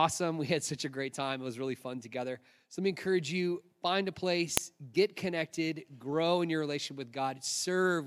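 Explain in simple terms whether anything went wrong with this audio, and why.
Something did go wrong: at 4.57 s, between "encourage you find a" and "get connected grow in", there is a single sharp click. This is a file header played as audio. The recording appears to have been assembled from separate pieces, and the short block of header data at the start of the second piece was not stripped out. The player treated those bytes as sound, producing a brief, loud snap unrelated to the speech around it.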